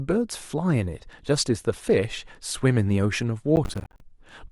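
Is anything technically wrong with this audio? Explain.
Yes. From 3.56 to 4.01 s the speech breaks into processor overload crackle. The processor kept missing its deadlines for short buffers of around 10 ms, roughly twenty times. Each miss dropped in a hard-edged silent gap. Together they make a gritty, tearing crackle.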